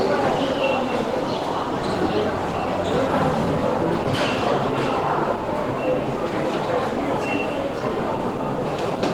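Throughout the clip the sound is muffled and plainly hoarse, most likely from Opus compression at a low bitrate near 16 kbps in its hybrid mode. Unlike MP3, it swirls less and leaves few spectral holes; energy fills every band, and content still reaches about 20.2 kHz.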